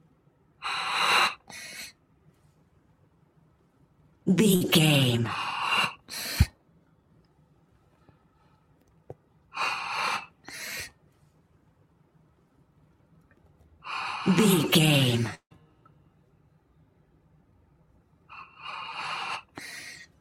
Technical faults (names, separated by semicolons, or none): burst of packet loss; long network dropout